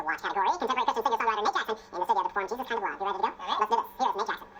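From start to end the audio is read two samples at a time, so it plays at double speed and a full octave (12 semitones) high. Unlike a simple clock mismatch, skipped samples fold high frequencies back.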